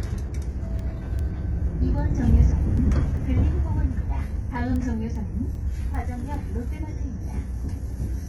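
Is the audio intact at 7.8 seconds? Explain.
No. Word clock ticks run from 0.40 s to 7.93 s, so 7.8 s falls inside that stretch, near the last of around twenty sharp ticks spaced about every 0.4 s. The receiving device is running on its own clock rather than locking to the sender's. Each time the two drift a sample apart, a single sample is dropped or repeated, producing a brief click. The steady spacing points to clocks roughly 50 parts per million apart.

The whole clip, including this moment, also has a top end with nothing above 11.8 kHz, and its upper detail sounds gritty and metallic rather than natural. This is likely HE-AAC compression at a very low bitrate, around 16 kbps. That codec codes only the lower spectrum and fakes the treble by copying lower bands upward under a coarse envelope. The rebuilt highs don't line up with the real harmonics, which gives the top end its synthetic texture.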